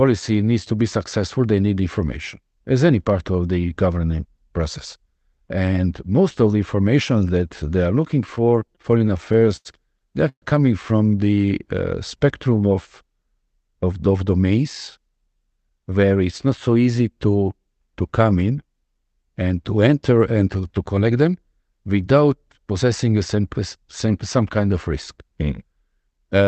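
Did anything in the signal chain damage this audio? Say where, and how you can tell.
Yes. The damage is in the network and jitter-buffer stage of the call path, not in the codec. The audio's top end stops near 8 kHz, which fits Opus at around 24 kbps working as designed.

Repeated stalls (stutter) run from 8.35 to 9.67 s. The speech hitches 15 times, with the longest hold about 87 ms. Packets were arriving late or more slowly than playback consumed them, so the buffer kept draining. Each time, the receiver stretched the last sound to fill the hole, 234 ms in all, or 18% of that stretch. Nothing is lost, but the speech drags and catches.

A call audio freeze occurs at 10.29 to 10.44 s. The last sound is carried on for 129 ms and fades, and about 70 ms of that is silence before the speech resumes exactly where it stopped. The likely cause is packets held up in transit, emptying the buffer. 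Playback then sits 129 ms later than before, because a gap was inserted into the audio rather than anything being dropped.

A jitter buffer slow-down runs from 11.18 to 11.47 s. The speech runs at 86% speed with the pitch unchanged, and sounds are drawn out. The receiver was rebuilding its reserve. It repeated single pitch periods and slivers of pause over and over, adding 50 ms in total, which is why the timing stretches without the pitch dropping.

A jitter buffer speed-up occurs twice, first from 13.45 to 15.71 s at 107% speed and then from 20.97 to 21.19 s at 113%. In both, the speech sounds hurried at normal pitch. The buffer was holding more audio than it targets, so the receiver trimmed out pieces one or a few pitch periods long in quick succession. This removed about 150 ms in the first stretch and roughly 40 ms in the second.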